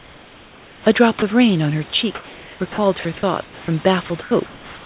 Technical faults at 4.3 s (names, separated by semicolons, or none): comfort noise in place of the background